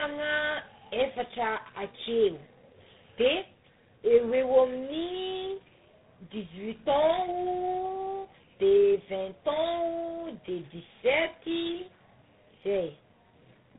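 Throughout the clip, the speech shows tandem speech coding. It passed through three speech coders in a row, decoded and re-encoded at each link. The sound fits a GSM full-rate stage followed by two G.726 ADPCM stages, the last at a low rate. Each stage worked on the previous one's errors, so they stack: the speech is rough, muffled and warbly, with nothing above 3.8 kHz.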